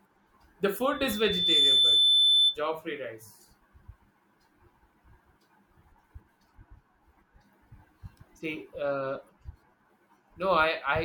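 A speech recording with loudspeaker feedback squeal from 0.9 to 2.58 s. A steady 3.5 kHz tone swells in under a second to about 10 dB above the speech. A microphone is picking up its own loudspeaker, and the loop is running away at that frequency.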